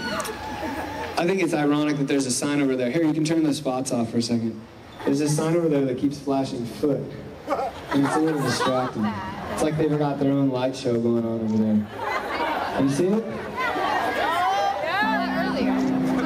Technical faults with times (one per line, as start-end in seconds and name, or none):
none